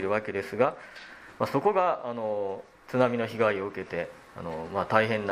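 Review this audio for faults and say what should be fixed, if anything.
No faults turn up anywhere in this audio, so nothing needs fixing. There are no dropouts, clicks, distortion or timing problems to address.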